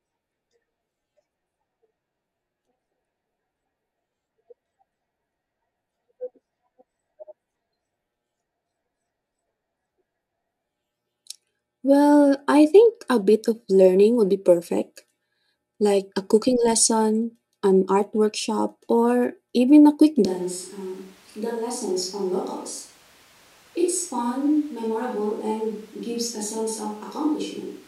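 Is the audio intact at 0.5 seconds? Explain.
Yes, the speech at 0.5 s plays through intact, with no dropout, click or distortion at that point.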